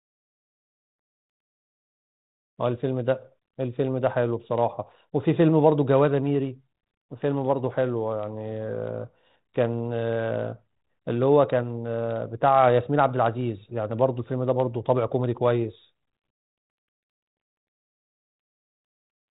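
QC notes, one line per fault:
The speech has been through a G.726 ADPCM stage at 32 kbit/s, so it is confined to the telephone band below 4 kHz and carries only a light layer of the codec's quantisation noise.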